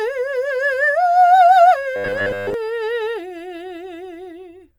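From about 1.96 s to 2.54 s the music picks up robotic sound from repeated short buffers. It goes rigid and metallic, with a steady buzz around 100 Hz laid over it, while the music's general shape still comes through underneath. The likely cause is new audio arriving too slowly, so the playback keeps looping the last stretch, roughly 10 ms at a time given that buzz, and skips most of what should be playing.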